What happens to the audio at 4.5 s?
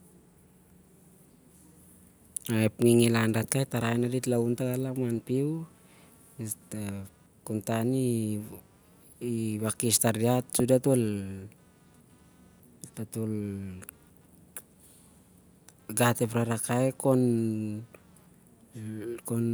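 Computer activity noise runs from 3.89 s onward. Computer load shifts the shared ground, adding a faint buzz pulsing about 200 times a second. On a spectrogram it shows as regular vertical striations.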